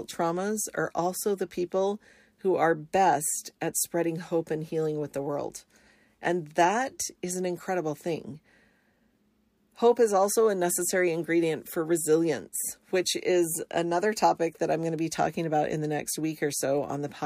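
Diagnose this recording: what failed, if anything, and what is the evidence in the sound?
Nothing failed in this speech recording, and the sound gives no evidence of a fault at any stage.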